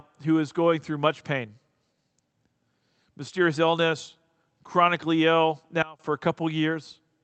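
At 5.82 s the digital gain likely changed from one sample to the next with no ramp, a sudden gain jump of the kind a setting change or bit shift produces. The speech and its background noise drop together by about 22 dB, then jump back up at 6.00 s, leaving a 0.17 s hole with abrupt edges. The call path adds its coding noise and band-limits the sound near 8 kHz.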